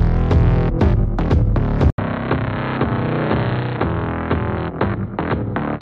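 At 1.90 s there's an 80 ms gap, then dull, quieter sound with nothing above 4.2 kHz, likely an input switched to a poorer device.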